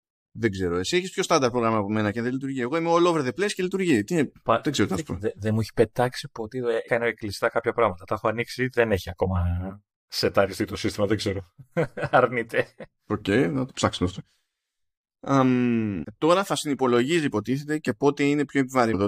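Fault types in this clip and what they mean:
Damaged data in a compressed stream: corrupted bytes in the coded speech make the decoder misread frames and resync at the next header. This gives brief blips of about 20 ms at 6.88–6.90 s, right after "μου έχει πετάξει ποτέ", at 16.02–16.05 s, just before "τώρα θα συνυπολογίζει", and at 18.93–18.95 s.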